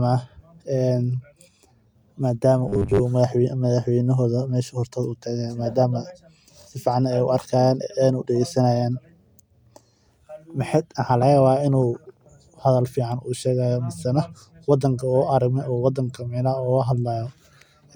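From 2.69 to 3.01 s, new audio was likely arriving too slowly, so the playback side kept looping the last short chunk it had, about 10 ms long, while most of the real incoming audio in that stretch was skipped. That loop imposes a fixed 100 Hz pitch, heard as robotic sound from repeated short buffers: the speech flattens into a rigid, metallic buzz that only loosely tracks the shape of the words.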